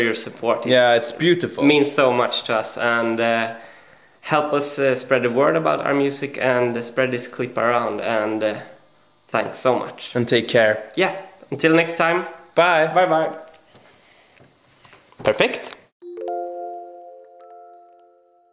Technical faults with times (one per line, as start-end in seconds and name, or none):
none